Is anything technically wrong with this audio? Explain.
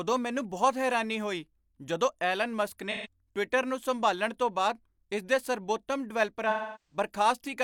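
Yes. AAC frame loss with concealment occurs twice. At 2.91–3.07 s, just after "ਹੋਈ ਜਦੋਂ ਐਲਨ ਮਸਕ", about 128 ms of frames went missing. The decoder rebuilt them from the last good spectrum, which leaves a brief smeared, phasey blur. At 6.50–6.96 s, after "ਬਾਅਦ ਇਸ ਦੇ ਸਰਬੋਤਮ", gaps scattered over about 430 ms include a run of roughly 300 ms, long enough for the concealment to decay toward silence before the sound fades back in.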